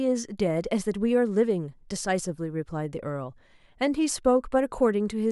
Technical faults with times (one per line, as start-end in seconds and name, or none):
none